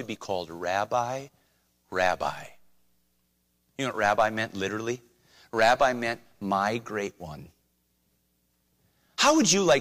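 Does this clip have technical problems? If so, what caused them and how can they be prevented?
No, the speech signal has no technical problems, so there is nothing here whose cause needs to be prevented.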